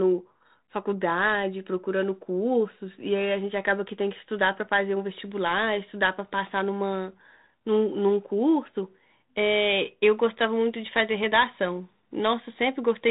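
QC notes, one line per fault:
No faults are heard in the speech. It passes over a G.726 ADPCM link at 32 kbit/s, with nothing above about 3.8 kHz and only light coding roughness.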